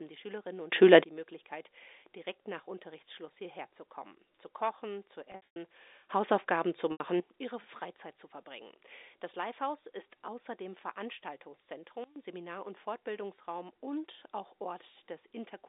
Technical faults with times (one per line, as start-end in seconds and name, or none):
0.72-1.04 sudden gain jump
5.32-5.56 packet loss with pitch repetition
6.08-7.20 sudden gain jump
6.92-7.00 packet loss with pitch repetition
12.04-12.16 sudden gain jump